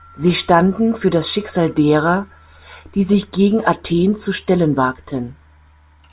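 No technical faults are audible at any point in the speech recording.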